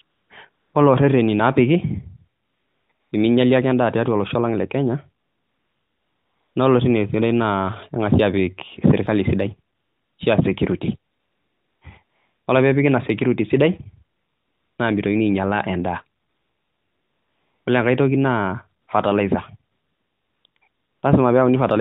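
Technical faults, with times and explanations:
0.02 to 21.0 s, AMR comfort noise: fifteen pauses, from about 40 ms up to 1.44 s, the longest at 5.24 to 6.56 s and 16.22 to 17.66 s. The phone's voice detector judged these stretches silent and stopped sending speech frames, so the receiver filled them with synthetic noise built from a rough level and spectrum description. The real background gives way to a smooth, even hiss that switches in and out. On a spectrogram it shows as a flat, featureless band below 4 kHz with hard edges. On the waveform it is a steady low floor with abrupt steps.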